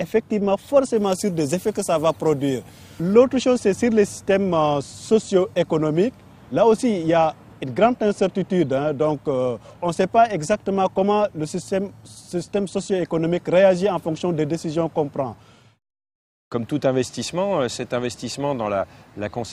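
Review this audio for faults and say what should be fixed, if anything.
Pre-emphasis left on, 0.97 to 3.14 s: a 50 µs FM treble boost was never de-emphasised, leaving 10 kHz about 11 dB hot, so the sound turns thin, bright and sibilant. Apply the matching de-emphasis wherever a pre-emphasised feed is decoded.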